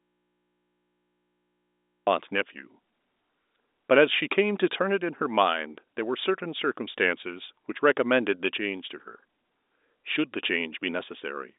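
The clip opens in an audio dropout to a faint residue that is already under way at 0.00 s and lasts until 2.07 s, when the speech cuts in abruptly. Through the gap only mains hum remains, roughly 45 dB below the speech level, the likely sign of an open input still feeding the line after the source was lost. The narrow telephone band, about 250 Hz to 3.7 kHz, is audible once the speech returns.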